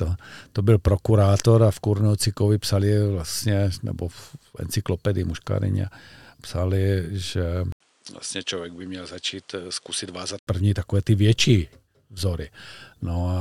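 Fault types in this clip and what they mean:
Input switched to a poorer device: From 7.72 to 10.47 s the speech turns duller and a bit quieter, with nothing above 10.7 kHz and a new noise floor well below it, after an 80 ms gap. That's likely the recording hopping to a lesser microphone.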